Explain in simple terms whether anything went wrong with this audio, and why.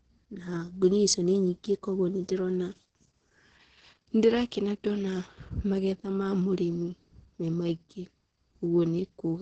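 Opus voice compression squeezed the speech too hard throughout, cutting everything above 9.2 kHz and coding it coarsely, so it sounds muffled, hoarse and slightly robotic.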